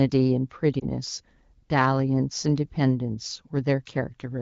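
At 0.79 to 0.85 s the speech briefly dips and warbles. This is a lost AMR speech frame: one 20 ms frame failed its checksum, so the AMR-WB decoder, running at 12.65 kbit/s, filled the gap by repeating the previous pitch and vocal tract settings at reduced gain.

At 2.52 s a single sharp click cuts through the sound, a thin instant break with nothing audibly missing. The likely cause is dropped samples: a couple of samples, a tiny fraction of a millisecond, vanished, so the waveform jumps abruptly to a later value.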